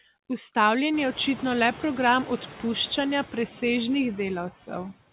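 Noise suppressor artifacts run through the whole speech clip. The suppressor cuts steady noise by about 17 dB, so background noise dips between phrases and swells under speech. The room noise rises by about 23 dB around one second and then sits about 18 dB below the speech. Above 4 kHz there is nothing, which fits a narrowband telephone codec.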